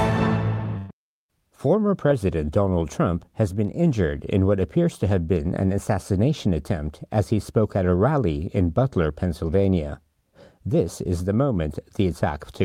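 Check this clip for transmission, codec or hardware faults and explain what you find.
One transmission fault stands out near the start. From 0.77 to 0.91 s the sound stops moving forward: the last moment before the gap is stretched into a steady tone or hiss that fades as it goes, and then the audio jumps ahead. This is a burst of packet loss. About 120 ms of audio never arrived in time, and the receiver covered roughly 116 ms of that by repeating and attenuating what it had last heard before resuming later in the stream.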